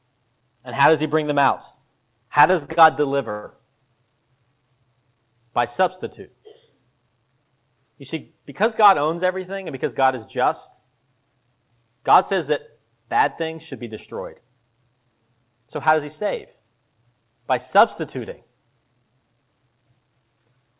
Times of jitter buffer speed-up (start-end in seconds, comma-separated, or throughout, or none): 13.41-14.99